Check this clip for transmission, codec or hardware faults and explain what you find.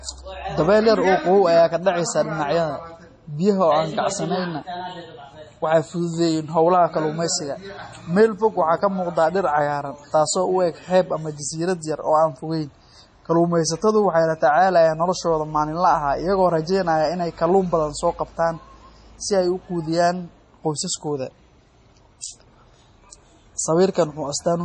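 One codec fault runs through the whole speech clip. Throughout, the audio sounds watery and swirly, with a hard treble cutoff at 11.1 kHz that shows as a flat ceiling on a spectrogram. This is likely heavy MP3 compression, consistent with about 32 kbps, with weak frequency lines flickering on and off between frames.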